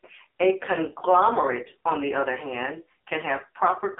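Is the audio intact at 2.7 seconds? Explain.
No. At 2.7 s, as through the whole clip, the speech carries AMR narrowband mobile codec damage. The signal is confined to a telephone band of roughly 300 Hz to 3.7 kHz, with nothing above 3.8 kHz, and the voice sounds heavily buzzy and synthetic, which points to a low bitrate around 5.9 kbps. The codec rebuilds speech from a vocal-tract model excited by sparse pulses. That model-driven buzz sets it apart from a plain low-pass filter, which would dull the sound without making it artificial.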